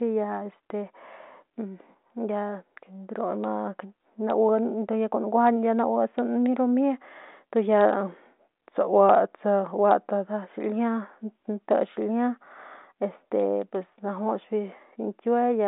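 From 2.62 to 3.32 s, and again from 8.02 to 10.24 s, the speech slows by 5.77% and drops about 103 cents, roughly a semitone, with speed and pitch moving together before snapping back to normal. This is likely a drift correction step, where clock-matching software resets the playback rate in one jump to rebalance its buffer. It is heard against a narrow telephone band that stops near 3.9 kHz.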